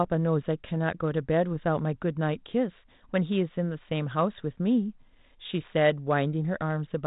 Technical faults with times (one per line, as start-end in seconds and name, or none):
none